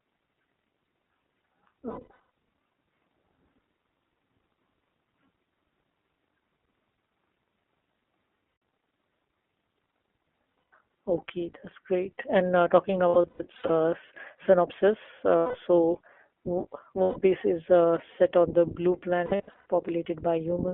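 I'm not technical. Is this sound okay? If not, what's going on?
No. The whole recording has passed through the iLBC codec, a compression method built for internet phone calls. It keeps only the telephone band, roughly 250 Hz to 3.4 kHz, so the speech sounds thin and boxed-in. The coding damage is plainly audible as a slightly rough, synthetic edge on every sentence. That grain fits the codec working in 20 ms chunks, each coded on its own.

There are also lost iLBC frames, where pieces of the stream never arrived and the decoder covered the holes by repeating the last bit of sound with some added noise. Each gap comes out as a brief held, buzzy or breathy tone. The voice returns to normal straight after. Single gaps of about 140 to 160 ms occur at 8.48 to 8.62 s, 10.59 to 10.71 s, 15.38 to 15.56 s and 17.02 to 17.18 s. Clusters of several short gaps, each lasting up to about a tenth of a second, occur at 1.90 to 2.17 s, 13.08 to 13.80 s and 19.26 to 19.61 s.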